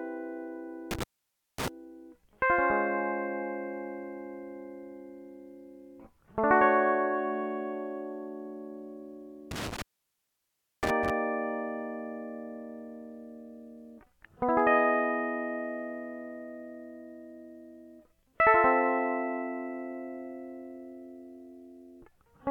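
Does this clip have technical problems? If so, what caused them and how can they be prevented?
Yes. Intermittent contact interrupts the music twice, from 0.91 to 1.68 s and from 9.51 to 11.10 s. A loose cable or plug briefly loses its connection, so the signal drops out for about 0.55 s in the first event and about 1.01 s in the second. Each gap opens and closes with crackle as the contact scrapes, and faint hiss sits in the gap. Preventing it means reseating connectors firmly, replacing worn cables and securing leads against movement.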